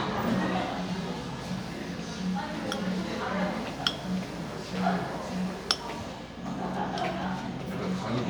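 No technical faults are audible.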